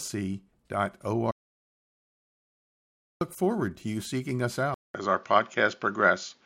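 Speech, with two faults. An audio dropout to silence runs from 1.31 s to 3.21 s: about 1.9 s of speech is gone, replaced by silence with no room tone, likely from the input briefly disconnecting or muting. The waveform shows a flat line, and the spectrogram a dark band. At 4.74 s the input switched to a poorer device, likely a headset or secondary microphone. After a 200 ms silent gap, the speech continues duller and a few decibels different in level, over a new faint noise floor. On the spectrogram, everything above 7.1 kHz is cut off from there to the end.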